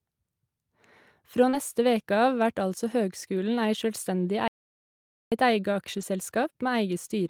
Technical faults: short concealed packet loss; lost packet rebuilt from error correction; audio dropout to silence

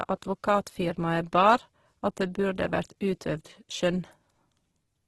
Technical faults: Opus compression

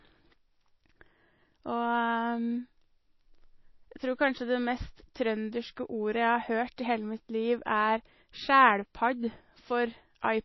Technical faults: MP3 compression

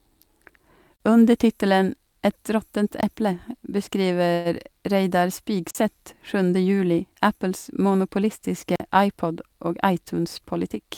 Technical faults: block of digital silence; call audio freeze; jitter buffer speed-up

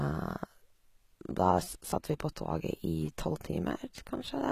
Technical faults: HE-AAC compression

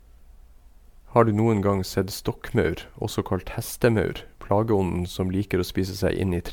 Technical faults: generation loss

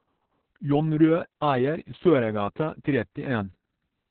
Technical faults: Opus voice compression

